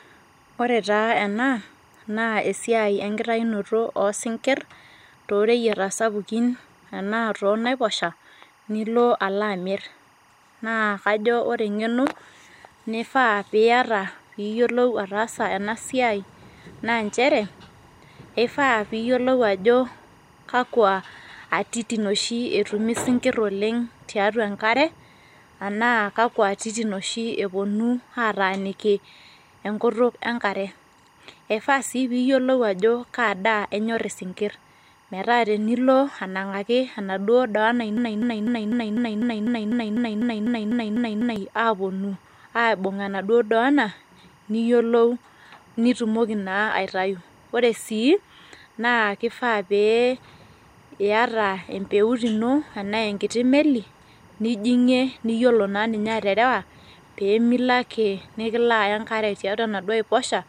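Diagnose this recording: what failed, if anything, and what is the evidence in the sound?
Timecode bleed runs through the whole recording as a steady chirping warble well behind the speech, roughly 35 dB down, flipping between pitches around 1 and 2 kHz. That is linear timecode, a square wave whose frequency doubles to encode each bit, leaking in from an adjacent track or cable. Its pattern repeats 24 times per second, matching a 24-frame code. This is an analogue wiring fault: crosstalk or poor shielding let the code couple into the audio path.

A broken-record loop runs from 37.97 s to 41.36 s, just after "enaduo doona". A 249 ms fragment repeats back to back 14 times before the audio resumes at "aponu aibung". The repeats are exact copies, so the audio that should have filled those three-odd seconds is gone. The likely cause is a stall in the playback or streaming buffer, which kept re-sending the last fragment it held until fresh data arrived.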